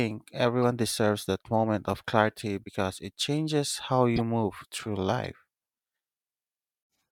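Speech with three corrupt frames decoded: a blip at 0.62 s before "deserves that moment of", a louder chirp from 4.16 to 4.20 s between "because it changes how" and "move through", and a quiet squeak at 5.24 s after "move through". Each is a damaged compressed frame (a couple to a few per event) that was decoded anyway, so misread gains and codes put energy at the wrong frequencies. On a spectrogram, each shows as a short vertical smear or tonal streak that breaks the speech's harmonic pattern. On the waveform, each is a short spike, peaking at about -15 dBFS for the loudest.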